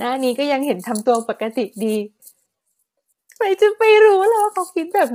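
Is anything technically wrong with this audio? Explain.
Yes. Throughout the speech, the grainy, rough texture points to low-delay AAC compression, likely AAC-ELD at a bitrate around 24 kbps. Its short frames resolve pitch harmonics poorly, so noise fills the gaps between them and the upper band sounds dulled and synthetic.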